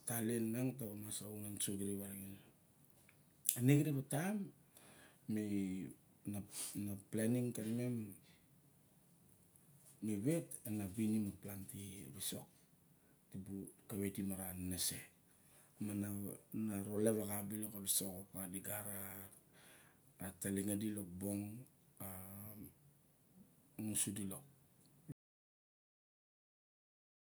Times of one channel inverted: none

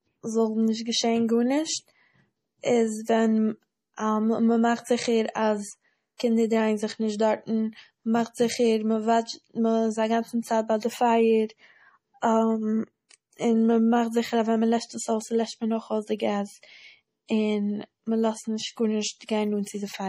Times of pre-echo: 6.17-6.20

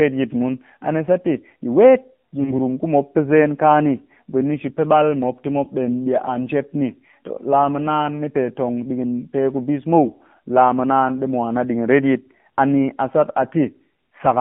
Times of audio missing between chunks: none

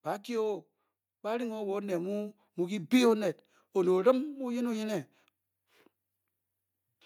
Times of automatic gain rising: 1.21-2.98

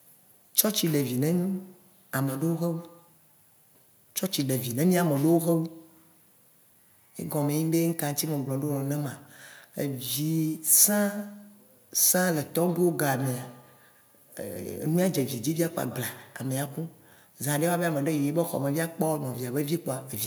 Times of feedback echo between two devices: 1.47-3.14, 12.68-16.53

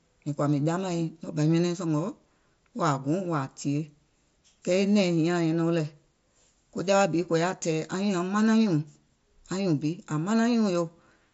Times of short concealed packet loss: none

